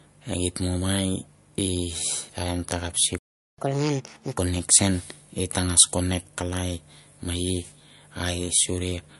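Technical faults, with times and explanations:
throughout, MP3 compression: watery, swirly speech with nothing above 11.3 kHz and plainly audible smearing, likely from MP3 encoding at a bitrate around 50 kbps, too few bits.
3.18 to 3.58 s, playback stall: just after "taim takap" the sound cuts out for 0.4 s, likely the player running out of data, then resumes where it stopped.
3.58 to 4.38 s, catch-up at higher speed: the sound runs at 1.5 times speed and roughly seven semitones higher while the player resamples its backlog to win back the lost time.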